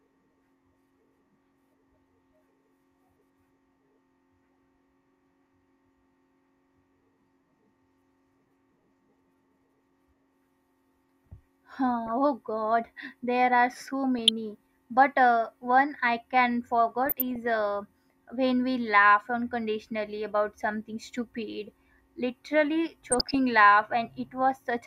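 DAB burbling occurs at 12.07–12.11 s, 14.19–14.29 s (after "there are so"), 17.03–17.36 s, 19.73–19.80 s and 23.11–23.35 s. Residual bit errors of a fraction of a percent corrupt MP2 samples and scale factors, so individual sub-bands jump in level and produce brief blips of noise.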